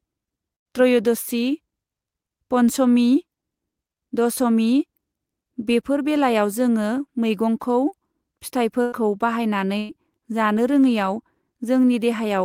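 At 0.55 to 0.67 s, 8.82 to 8.94 s and 9.78 to 9.91 s the speech breaks in a burst of packet loss. Each time, about 100 ms of audio never arrives, and 120 ms in the third. The receiver fills the hole by stretching the last sound and fading it out. That fill lasts 96, 99 and 110 ms. It sounds like a brief buzz or hiss. Then speech jumps ahead, with the lost part gone.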